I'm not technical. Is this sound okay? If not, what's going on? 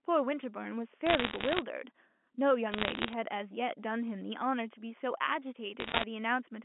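No. Bit errors on a digital phone line cause three bursts of crackle, at 1.07 to 1.62 s, 2.72 to 3.13 s, and 5.80 to 6.04 s. The speech travels as a stream of numbers, and a few of those numbers got corrupted along the way. A number damaged in one of its most important parts becomes a sharp tick, and many together sound like crackle over the voice. The last burst is the roughest and the middle one the mildest. Around them, the usual narrow telephone sound comes through.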